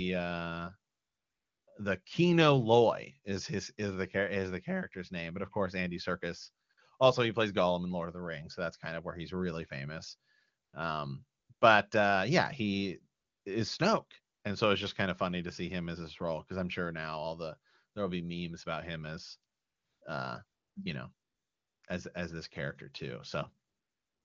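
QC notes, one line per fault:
0.91–24.24 s, AMR comfort noise: thirteen pauses, 20 ms to 0.76 s long, longest at 0.91 s, 21.13 s and 23.67 s; another at 19.53 s falls between "memes about him as" and "uh you know". Speech frames stop, and a smooth synthetic noise replaces the real background. Unlike a gate or dropout, the gap is filled, not silent.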